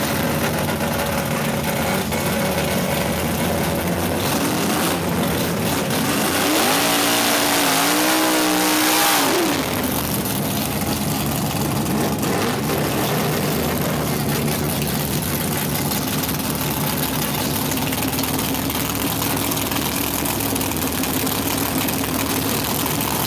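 Nothing in this audio stands out as a technical problem; it just runs along without anything going wrong that a listener would pick up on.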